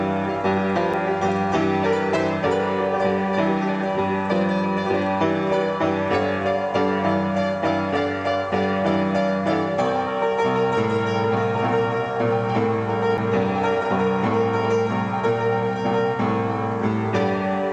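The laser lost its track and landed on another turn of the spiral, producing a CD skip at 0.93 s and 13.17 s: a brief tick, a near-instant mute, then a jump in the sound.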